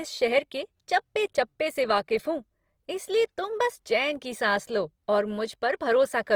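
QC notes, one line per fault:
Throughout: Opus compression. The speech sounds rough and grainy, with a noisy texture laid over its tones. The damage is plainly audible. The cause is likely Opus coding in its music mode, at a rate that fits about 24 kbps. That mode keeps each band's energy but runs short of bits. It fills the starved bands with folded copies or noise. So there are few holes and little swirl. The full band survives, up to 20.4 kHz.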